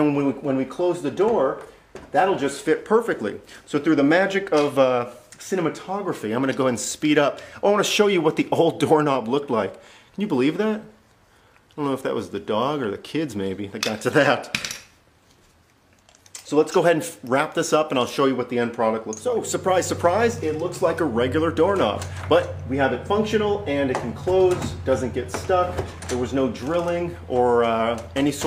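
Nothing is technically wrong with this audio.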